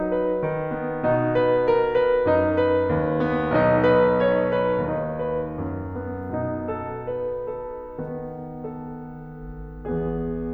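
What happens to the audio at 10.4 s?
At 10.4 s the music plays on intact, with no dropout, click or other fault at that moment.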